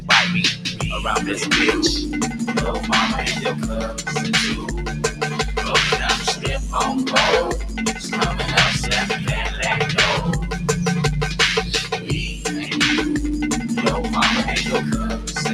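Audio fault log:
throughout: noise suppressor applied to music or sounds. The level pumps and thins in a swing of around 5 dB, with sustained parts and tails sagging while attacks stay firm. A speech-oriented suppressor keeps treating steady content and ambience as noise and pulling it down.
0.54–0.82 s, 4.95–5.38 s, 7.97–8.14 s, 11.93–12.1 s: sound cut by the noise suppressor. Brief dips of about 9, 8, 7 and 7 dB make the held sound sink or its decay end early. The suppressor judged these stretches as noise and attenuated them harder.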